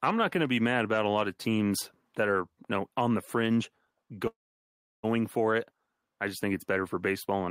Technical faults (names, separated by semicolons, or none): call audio freeze